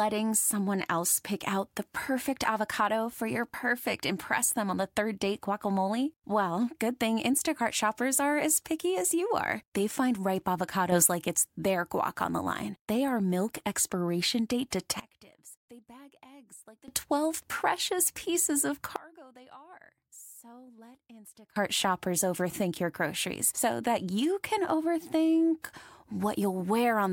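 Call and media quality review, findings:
Sudden gain jumps, three spots. 10.92–11.08 s: level steps up about 6 dB, background noise rising with it, then drops back. 15.0–16.88 s and 18.96–21.56 s: sound and noise floor both fall about 24 dB at once, then snap back at the end. Hard step edges, no fade in or out, so it's likely a digital gain change applied from one sample to the next with no ramp.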